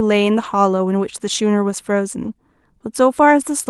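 At 0.43 to 0.45 s the speech turns briefly rough and grainy, with no gap. This is a lost packet rebuilt from error correction. The missing stretch was filled from a low-bitrate copy carried in the next packet, which fits a single 20 ms Opus frame. A longer patch follows at 2.23 to 2.29 s, about 40 ms. That points to two frames. The same coarse, noisy texture replaces the normal Opus coding, which tops out at 12 kHz.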